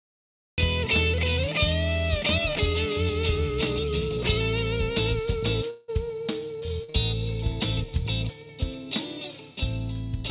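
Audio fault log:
0.00–0.58 s, cut-off start: The clip opens on digital silence, and at 0.58 s the sound appears already in progress, with no attack or fade-in. Because capture began late, the waveform jumps from zero straight to a mid-sound level, which gives a hard, squared-off onset that can carry a small click. The listener hears the sound begin abruptly, as though entered partway through rather than started naturally.
5.70–5.90 s, long network dropout: For about 0.18 s the real audio is replaced by a synthetic continuation of the preceding sound, heard as a buzzy or hissy extension that decays across the gap. It never falls to silence, because the concealment lasts as long as the missing stretch. The likely cause is a network interruption that stopped packets arriving, leaving the receiver to extrapolate from its last good audio before real sound resumed at 5.90 s.
6.84–6.96 s, short concealed packet loss: Two back-to-back losses, at 6.84–6.90 s and 6.90–6.96 s, each about 40 ms of audio that did not reach the decoder in time. 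Each hole is filled by extending the last received sound, as pitch if voiced or as shaped noise if not, before blending into real audio again. Occurring consecutively, they produce a brief smear or wobble of roughly 0.12 s, where a short transient may drop out, heard over the narrowband call path with nothing above 4 kHz, which fits a G.711 mu-law link.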